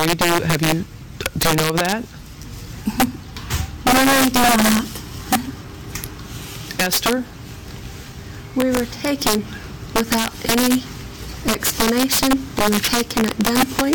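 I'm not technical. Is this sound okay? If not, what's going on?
No, there's integer overflow throughout: the loudest moments wrap around instead of topping out, so a small fraction of peaks become harsh, violent cracks, sharper than ordinary distortion.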